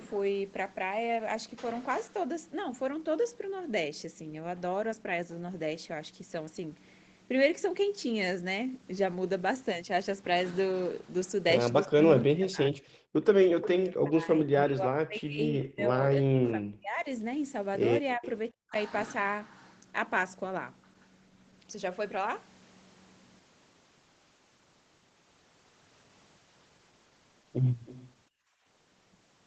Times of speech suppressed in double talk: 11.87-12.91, 13.98-17.05, 18.17-18.75

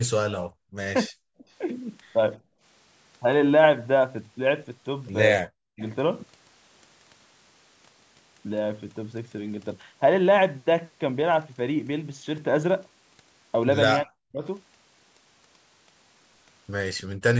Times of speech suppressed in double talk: 0.28-0.63, 1.08-1.29, 5.41-5.81, 14.03-14.43, 17.14-17.26

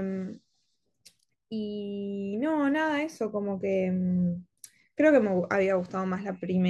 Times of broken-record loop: none

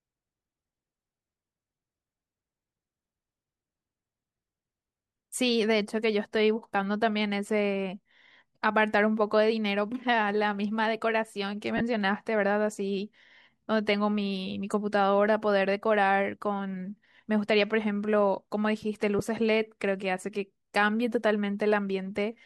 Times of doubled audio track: none

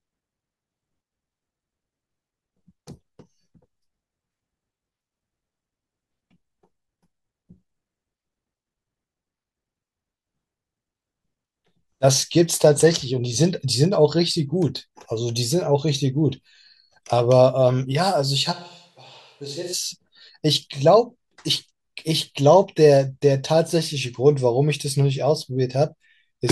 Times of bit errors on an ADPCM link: none

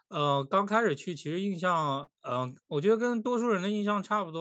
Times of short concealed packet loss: 2.03-2.10

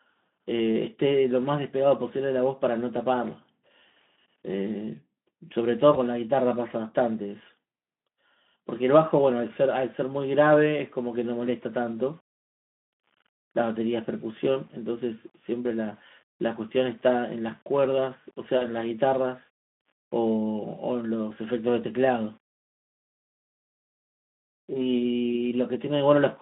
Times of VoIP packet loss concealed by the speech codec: 5.93-5.98, 11.97-12.02, 18.57-18.65

